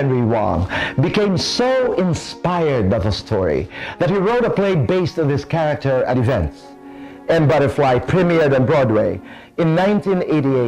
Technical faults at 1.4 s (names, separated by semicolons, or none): none